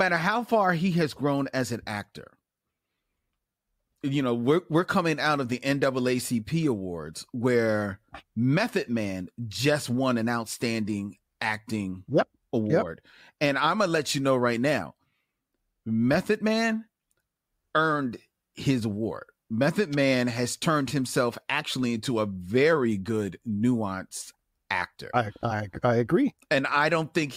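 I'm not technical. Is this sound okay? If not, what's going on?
Yes, the recording is technically sound, with nothing in the signal that needs attention.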